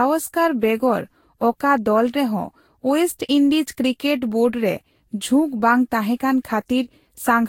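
Speech with generation loss throughout: swirly, hollow, smeared consonants, nothing above 16.7 kHz, likely from several Vorbis re-encodes around 60 kbit/s stacking up.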